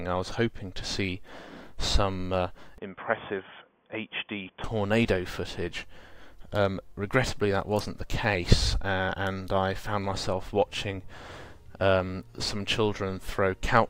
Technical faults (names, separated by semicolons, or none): input switched to a poorer device